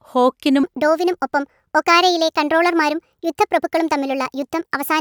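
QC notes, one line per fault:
0.64–5.00 s, wrong sample rate: speech runs 1.38 times fast and 5.6 semitones high, fitting 32 kHz audio played at 44.1 kHz. Harmonics sit higher on the spectrogram and the waveform is squeezed in time.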